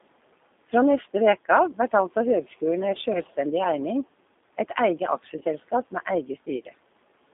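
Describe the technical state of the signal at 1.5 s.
At 1.5 s the speech carries G.729 codec damage, present throughout the clip rather than as a local event. The coder rebuilds each 10 ms frame from a vocal tract filter, a pitch predictor and a few fixed pulses, so the voice sounds plainly rough and synthetic. The passband runs from about 250 Hz to 3.6 kHz, consistent with an 8 kbit/s telephone link. Room noise sits about 21 dB beneath the speech.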